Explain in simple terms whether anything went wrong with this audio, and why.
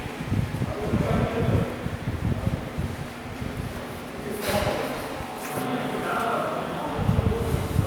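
Nothing went wrong here; the sounds come across steadily the whole way, with no glitches, dropouts or odd noises to point to.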